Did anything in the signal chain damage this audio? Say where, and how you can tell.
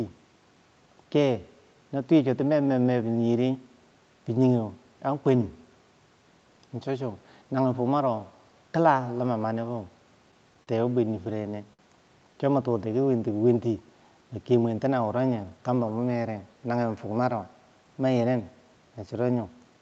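Yes. The damage sits in the network and jitter-buffer stage of the call path. The sound is band-limited to 8 kHz by the call codec.

Two short stalls from a late packet occur at 10.63 to 10.69 s and 11.73 to 11.81 s. A sound is held unnaturally long, by 40 ms and then 56 ms, with a slight buzz or dip. Nothing is skipped. The buffer ran dry, stretched the last audio, and then resumed where it stopped.

A jitter buffer slow-down runs from 12.33 to 13.30 s. Pitch is unchanged, but delivery drops to about 94% speed and sounds drawn out. The receiver repeated single pitch periods over and over, adding 69 ms to rebuild its reserve.

A jitter buffer speed-up runs from 15.29 to 15.98 s. The audio hurries to about 111% speed at the same pitch. The buffer was holding excess delay and trimmed it by cutting short pitch-period segments, removing roughly a tenth of a second in total.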